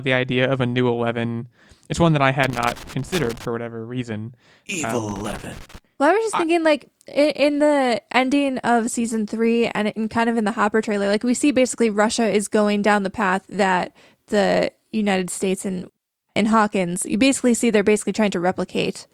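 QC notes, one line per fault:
2.43–3.45 s, loose connector crackle. An irregular burst of scratchy crackle lasts about a second, between "it's one that I" and "whatever reason". A worn contact is making and breaking as it moves, chopping the signal on and off. Any DC on the line turns each break into a pop.
5.07–5.78 s, loose connector crackle. A second, shorter burst of about 0.7 s has the same ragged chopping. A contact is intermittently losing connection.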